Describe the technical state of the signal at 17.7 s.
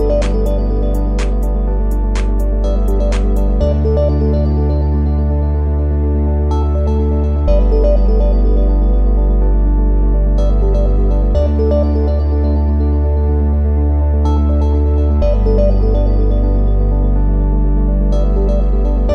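At 17.7 s the signal is intact, with no audible technical fault.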